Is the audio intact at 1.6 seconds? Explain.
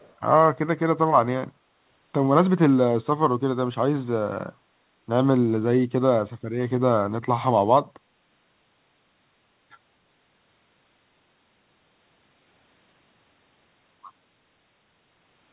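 No. From 1.59 to 1.78 s the background is gated by the echo canceller. While the far end played, the canceller pulled the microphone down, by about 6 dB at its deepest. The room sound dips for roughly 150 ms, then returns.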